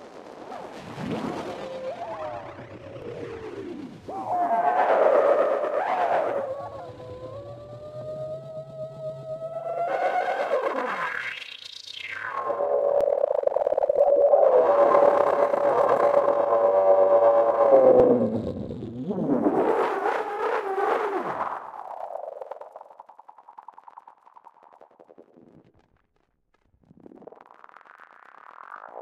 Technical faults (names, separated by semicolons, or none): audio missing between chunks